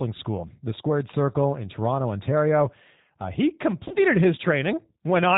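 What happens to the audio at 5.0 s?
At 5.0 s, as throughout the clip, G.729 coding rebuilds the speech from a vocal-tract filter and sparse pulses at about 8 kbit/s, leaving it rough and synthetic; a spectrogram shows nothing above 4 kHz.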